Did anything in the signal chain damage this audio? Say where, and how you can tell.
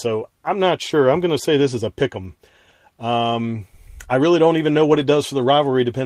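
Yes, at the network stage. Just after "really don't even know", from about 4.93 to 5.03 s, the speech turns briefly rough and noisy, yet never drops out. This is a lost packet rebuilt from error correction. About 60 ms of audio, which fits three 20 ms packets, was played from the low-bitrate copies carried in the following packets. The waveform shows no gap or silence, while the spectrogram shows a short, grainier, noisier patch.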